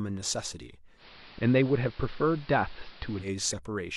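Speech in which, at 0.96 s, digital radio blending to analogue sets in: a hybrid receiver loses its digital stream and cross-fades over about 100 ms to the station's AM broadcast, returning at 3.30 s. On a spectrogram the upper treble vanishes, noise fills the gaps well under the signal, and the waveform shifts about 2 dB in level.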